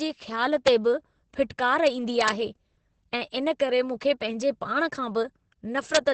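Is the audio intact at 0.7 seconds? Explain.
No. Right around 0.67 s, just before "बि फिटकार", there's an integer overflow. A peak went about 1 dB past the largest value the integer could hold. Instead of being limited, it wrapped to the opposite sign and flipped across the full range. You hear that as a sharp, violent crack, much harsher than ordinary clipping.

Underneath that, the whole stretch carries heavy Opus voice compression in its SILK speech mode. Nothing survives above about 8.5 kHz, and the excitation is coded coarsely, which fits a rate of roughly 10 kbps. So the speech at that point sounds muffled, hoarse and a bit robotic.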